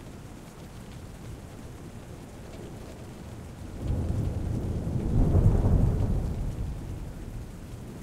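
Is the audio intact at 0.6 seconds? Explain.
No. At 0.58 s a skip ahead drops roughly 0.7 s of sound, and the two sides of the jump are joined directly with no filled gap.

From 0.68 s to 4.69 s, jitter buffer speed-up trims short pitch-period pieces repeatedly, running the sound about 6% faster at unchanged pitch and removing around 0.2 s.

Throughout, including 0.6 s, a doubled audio track adds a dry copy about 5 dB quieter and roughly 0.4 s behind, likely from a second, slower capture path.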